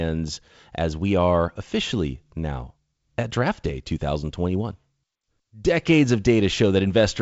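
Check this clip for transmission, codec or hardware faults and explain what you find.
No transmission, codec or hardware faults turn up in this speech. The G.722 wideband telephone coding at 56 kbit/s is working as expected: the audio stops at about 7.7 kHz, with only a light coding hiss.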